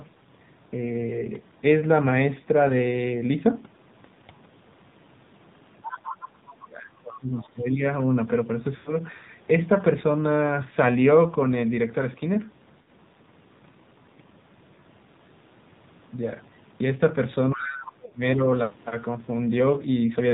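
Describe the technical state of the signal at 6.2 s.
At 6.2 s the clip sits inside a brief second voice, from 5.84 to 6.28 s, running well below the main talker, roughly 10 dB down. This is likely the other side's voice leaking through: the far end played over a loudspeaker and not fully removed by the echo canceller. Unlike crosstalk or a second person in the room, it arrives as a scrap of returned audio.

Under this, as everywhere in the clip, the AMR narrowband mobile codec is plainly audible. Nothing above 4 kHz survives, and the pulse-driven vocal-tract model gives the speech a buzzy, synthetic edge that fits a low AMR-NB mode near 7.4 kbps. A plain low-pass filter would dull the sound without that buzz.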